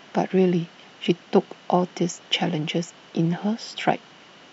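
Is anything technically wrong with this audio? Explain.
Yes. Two short glitches cut into the speech, at about 1.05 s and 3.37 s, each lasting under 20 ms. They come from damaged data in a compressed stream: corrupted bytes make the decoder misread those frames and lose sync until it finds the next valid frame header.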